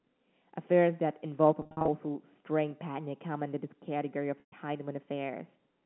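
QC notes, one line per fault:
1.62–1.88 s, packet loss with pitch repetition: about 200 ms of audio is lost in scattered bursts across 260 ms, the longest run 50 ms, which fits 10 ms packets. Each gap is bridged by repeating the last pitch period, so the speech flickers between real sound and a brief buzzy hold. That repeated pitch distinguishes it from plain dropouts, which would leave silent holes rather than a sustained tone.
4.40–4.52 s, packet loss with pitch repetition: a single 120 ms gap, again consistent with 10 ms packets. The last pitch period loops for the first 50 ms or so and fades towards silence, and the speech returns through a short cross-fade. Unlike a buffer stutter, which replays whole chunks of sound, only one pitch cycle repeats. The band limit of the G.711 line stays steady through the gap.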